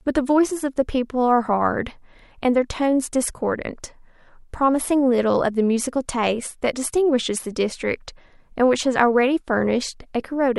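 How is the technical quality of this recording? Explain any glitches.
Nothing in this recording stood out as a technical problem on listening.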